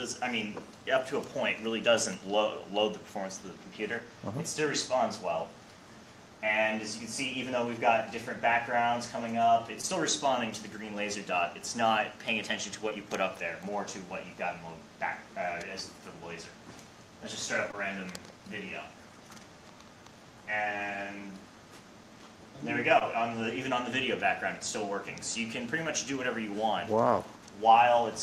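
Short concealed packet loss appears at 9.81, 12.89, 17.71 and 22.99 s: each time about 20 ms of audio arrived too late for the decoder, so the receiver extended the preceding sound to cover the gap and blended back, leaving a brief smear or wobble.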